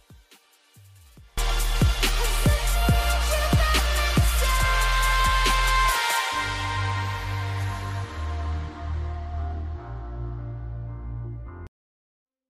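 From the start to about 1.38 s the summed sound collapses to a faint remnant, roughly 30 dB down, before full level returns. The likely cause is one channel inverted: with one stereo side's polarity reversed, everything common to both channels cancels in mono, leaving only their difference. On a waveform this opening stretch sits as a near-flat sliver before the envelope jumps up; a spectrogram shows the same span as pale and sparse.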